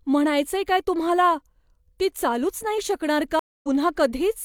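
At 3.39 s the speech drops into about 0.24 s of silence, then resumes at 3.68 s roughly 0.3 s further on, skipping that stretch. This is a stream reconnect: the connection broke, and the player rejoined with a fresh decoder mid-stream.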